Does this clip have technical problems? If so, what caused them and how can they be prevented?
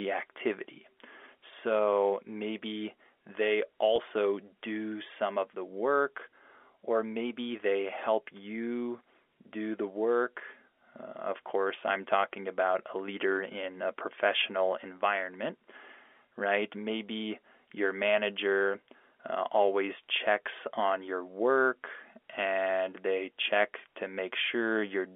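Yes. There is one brief packet loss with pitch repetition, from 3.96 to 3.98 s, between "maybe they" and "do some of the". About 20 ms of audio went missing, which fits a single lost packet. The receiver filled the hole by repeating the last pitch period. So the sound briefly holds and turns slightly buzzy, then carries on. The narrow telephone band comes from the G.711 coding. To prevent this, use a network with less loss or a larger jitter buffer.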